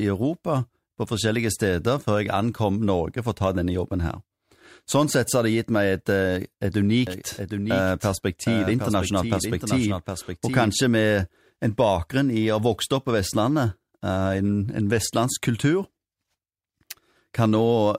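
Between 7.07 and 10.71 s the speech is likely being captured twice, with a slower second path feeding a delayed copy into the mix, producing a doubled audio track. A full-band duplicate trails the original by roughly 0.7 s at around 5 dB quieter, so each syllable returns as a dry repeat with no reverberant tail or room colour. The copy cuts in and drops out abruptly at those two points.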